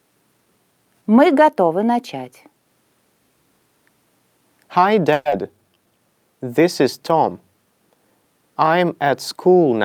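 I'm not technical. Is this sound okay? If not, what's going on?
No. From 5.13 to 5.34 s, the sound gives way to a fading buzz that stretches the last bit of audio, then resumes with about a tenth of a second missing. This is a long network dropout, likely caused by audio failing to arrive in time.

Right after, from 5.43 to 5.87 s, comes a jitter buffer slow-down. The receiver repeats tiny slices to rebuild its reserve. The sound plays at about 84% speed, at the same pitch, adding roughly 78 ms and drawing things out.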